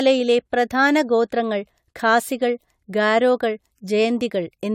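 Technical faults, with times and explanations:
Throughout: generation loss. The speech sounds swirly, smeared and hollow, with a watery shimmer that a single moderate-bitrate encode would not cause. Consonant attacks are blurred and soft. Nothing is present above 18.2 kHz. The likely cause is repeated decoding and re-encoding, about seven passes, with a lossy codec whose character points to AAC at roughly 96 kbit/s. Each pass quantised again on a shifted frame grid, so noise accumulated.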